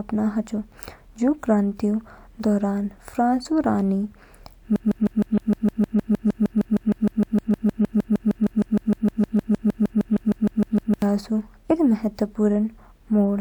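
At 4.76 s the speech locks into a broken-record loop: a fragment of about 0.15 s repeats exactly, back to back, 41 times until 11.02 s, giving a rapid, mechanical stutter at roughly six or seven repeats per second. The likely cause is a stall in the player, encoder or stream that kept resending the last fragment it held. Whatever should have played across those six seconds is lost.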